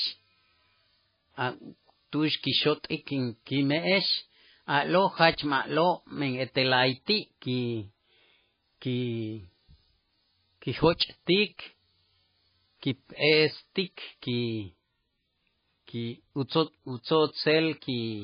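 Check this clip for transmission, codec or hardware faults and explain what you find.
The speech carries one fault, heavy codec damage, from start to finish. The sound points to MP3 compression at a very low bitrate, which fits about 17 kbps. With so few bits, the encoder likely cut everything above 5 kHz and zeroed weak frequency lines, giving watery, swirly speech with metallic s sounds. A spectrogram shows a flat ceiling at 5 kHz and flickering, patchy fine detail below it.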